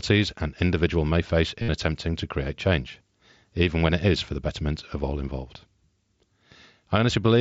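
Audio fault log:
1.62–1.69 s, concealed Bluetooth headset packet loss: between "an individual may face" and "attempting to create change", a 60 ms buzzy, full-level tone replaces the audio as the receiver loops recent waveform over missing packets, which fits about eight lost frames.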